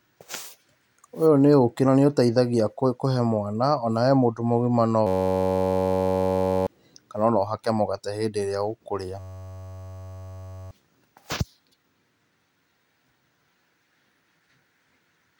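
At 5.07 to 6.67 s and again at 9.20 to 10.71 s, a system hang loop replays one 10.67 ms slice, which fits a 512-sample buffer, as a steady 93.8 Hz buzz while about a second and a half of speech is lost. Waveforms show identical repeating cycles, and spectrograms show evenly spaced harmonic lines.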